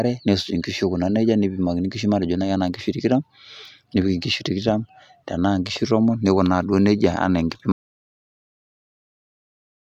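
At 7.72 s the input was likely lost, a dropped link or device, while recording carried on writing silence. That is an audio dropout to silence: the speech cuts off mid-flow and the last 2.2 s are silence, with no room tone, right to the end.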